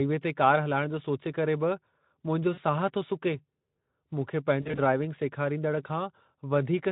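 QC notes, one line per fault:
2.53–2.59 s and 4.61–4.79 s, VoIP packet loss concealed by the speech codec. Missing audio, 40 ms at first, then about 100 ms scattered in gaps up to 40 ms, is filled by extrapolating the last pitch and filter. This produces buzzy or noise-like fading sound that shows as smeared harmonics and a sagging waveform envelope above the light Speex coding.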